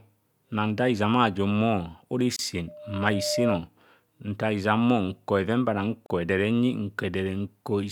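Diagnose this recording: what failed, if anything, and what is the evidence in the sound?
Two short dropouts in otherwise continuous speech point to the codec and file-assembly stage: a gap at a join of encoded pieces. The first opens at 2.36 s and lasts about 28 ms (to 2.39 s), the second at 6.06 s for about 37 ms (to 6.10 s). Each has smeared edges, and the speech resumes where it left off. The pieces were encoded separately and concatenated without removing each run's leading encoder delay and trailing frame padding.

A loudspeaker feedback squeal sits in the capture stage, in the acoustic path between loudspeaker and microphone. From 2.68 s to 3.64 s a single tone at 602 Hz rises out of the speech. It swells over roughly three-quarters of a second and peaks at around 5 dB above the speech. At that frequency the mic-to-speaker loop gain exceeded unity, so the tone fed on itself until the amplifier limited it or the loop was broken.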